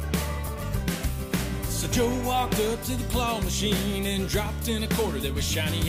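The audio has two brief skips, at 0.47 s and 4.46 s. Both come from overlap between stream segments. The stream arrives in 2-second pieces, and at these joins the time stamps of neighbouring pieces overlap. The player trims the overlap, but the sound there was not actually duplicated. A sliver of real audio is lost, and the waveform jumps across the gap. That jump is heard as a tiny skip.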